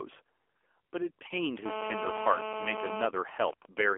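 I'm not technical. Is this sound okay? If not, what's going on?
No. The speech went through the AMR narrowband mobile codec, a low-rate phone compression that drops everything above about 3.6 kHz, so the voice sounds muffled, buzzy and synthetic throughout.

From 1.66 to 3.07 s, a nearby mobile phone in a call leaks its radio pulses into the audio circuit. This GSM phone buzz is a harsh, steady rasp repeating 217 times a second.

From 3.17 to 3.90 s, that phone's user has gone silent, so it sends only brief radio bursts. These GSM signalling bursts come through as even ticks with a longer buzz twice a second.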